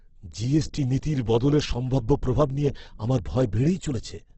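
The speech here sounds rough and grainy across the whole clip, with heavy damage and nothing above 8.2 kHz. This is likely Opus compression in its CELT music mode, and the loss fits a bitrate near 12 kbps. A spectrogram would show a flat ceiling at 8.2 kHz and noise-filled, smeared bands below it.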